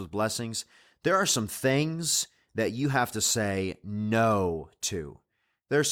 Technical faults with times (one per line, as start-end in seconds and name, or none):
none